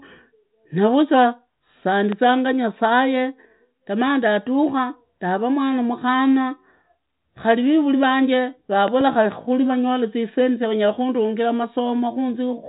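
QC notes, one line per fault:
2.12–2.15 s, loud pop: a brief voltage step, likely from a plug, switch or static discharge, enters the signal path just before "nyasaye gamaa ndadukha ndaraa". The downstream circuitry shapes it into a single sharp pop peaking about 10 dB above the speech. The speech continues uninterrupted beneath it.
8.88–9.03 s, loud pop: a second disturbance of the same kind, likely another voltage glitch, adds pulses heard as two pops in quick succession, peaking about 10 dB above the speech. The telephone-band speech, which stops near 3.8 kHz, carries on underneath.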